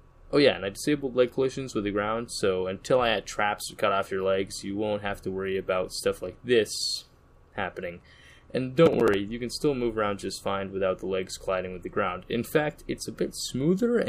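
Processor overload crackle at 8.86 to 9.14 s: short buffers, around 10 ms each, miss their deadlines, and stale audio repeats with hard edges, producing a brief gritty tearing.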